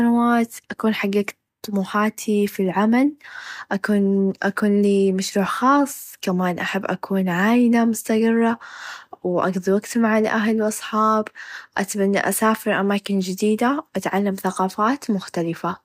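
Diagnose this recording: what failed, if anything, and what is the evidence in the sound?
Sharp single clicks at 7.40 s and 10.69 s. Likely dropped samples in the driver or buffer: a few samples vanish, so the waveform jumps.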